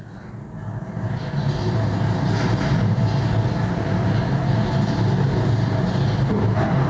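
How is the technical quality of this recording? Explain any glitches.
The recording has one fault, gain pumping, present throughout.

Gain pumping, throughout: the gain swings by around 5 dB, pulled down on each loud sound, so the audio sounds squashed. This is likely from input gain set far too high, with a fast limiter clamping each peak. On a waveform the envelope looks flattened. The spectrogram shows nothing above an 8 kHz ceiling that comes from the call's microphone processing.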